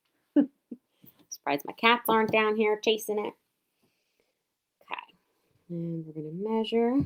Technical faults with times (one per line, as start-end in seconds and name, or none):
4.00-7.05 call bitrate drop